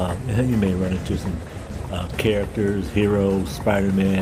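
From 0.62 to 2.21 s the audio turns coarse and muffled, its highs cut away, which fits a call bitrate drop from 64 to 16 kbps.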